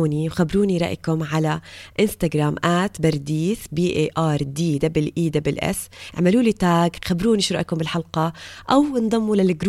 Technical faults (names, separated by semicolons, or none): dropped samples